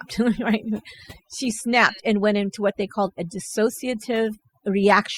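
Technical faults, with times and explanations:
Throughout, overdone noise removal: the noise reduction on this speech was pushed too hard. Whenever a frequency band sat close to what the tool took for noise, it got pulled right down or switched off, and the softer bits of the voice went along with it. So the background drops away, with little twinkling specks popping in and out.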